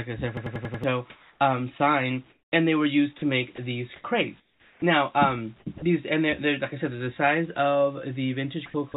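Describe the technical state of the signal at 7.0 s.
At 7.0 s the signal is intact, with no fault present, only the narrowband character of the call path, which carries nothing above 4 kHz and fits a G.711 A-law codec at 64 kbps.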